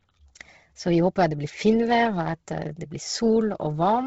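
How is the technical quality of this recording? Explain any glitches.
The recording is heavily degraded by lossy compression for its whole length, most likely Bluetooth LC3 compression. Throughout, the speech has a breathy, grainy edge, and nothing is present above about 7.8 kHz. LC3 works in short transform frames, consistent with 10 ms here, and at a low bitrate, which fits roughly 16 kbps, it discards much of the upper spectrum and substitutes shaped noise. That noise fill gives the voice its breathy, grainy texture, while the hard cut at 7.8 kHz makes the sound dull and band-limited.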